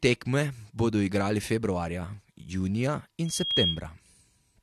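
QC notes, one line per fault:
3.25–3.81 s, loudspeaker feedback squeal: right after "bodo igrali februarja junija" the microphone picks up its own loudspeaker and the loop gain exceeds unity at 3.3 kHz. A single piercing tone swells over roughly a third of a second, rising somewhat above the speech before stopping.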